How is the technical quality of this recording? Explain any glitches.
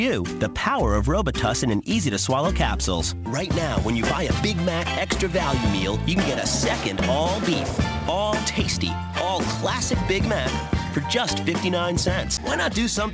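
No glitches to report here: it's a normal-sounding call recording, with the top end stopping around 8 kHz the way a wideband call codec like G.722 leaves it.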